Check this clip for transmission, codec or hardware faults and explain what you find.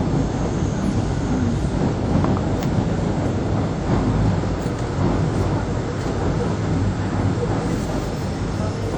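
A lossy transform codec, likely WMA compression at a low bitrate, has degraded the whole clip from start to finish. The encoder splits the signal into long blocks and quantises each coarsely, so its error smears across tens of milliseconds and faint spectral detail is discarded. The damage is plainly audible: the sound rings and turns washy, with a hiss that swells and fades with the material. That fits a bitrate around 48 kbps, and nothing is present above 19.6 kHz.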